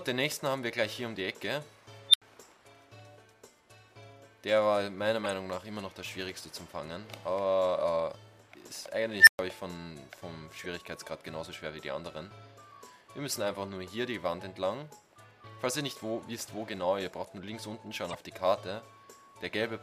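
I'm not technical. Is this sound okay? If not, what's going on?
No. There are two kinds of problem, five glitches in all.

At 2.09 s and again at 9.2 s, a tone suddenly swells into a loud squeal. The first is very high, around 4 kHz, and peaks within about 45 ms. The second is lower, around 2 kHz, and takes about 70 ms. Each is followed by a brief gap of silence, about 80 ms and 120 ms. This is an unstable filter: a sound-shaping stage fed back on itself until its output ran away and then shut off.

At 5.24 s, 10.62 s and 18.08 s there are short chirps or blips, each lasting well under a tenth of a second. The one at 10.62 s is the faintest. These come from a corrupt frame being decoded. The audio is stored in small compressed chunks, and a few chunks were damaged but played anyway, so sound appeared at the wrong pitches for just those moments.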